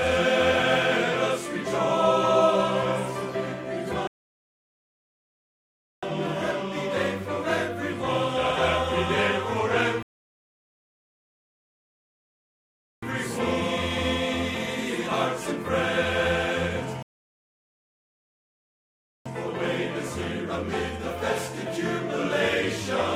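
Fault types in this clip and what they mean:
Rebuffering stall: Playback ran dry and waited for data. Silence falls at 4.07, 10.03 and 17.03 s, adding 2.0, 3.0 and 2.2 s. Sound resumes intact.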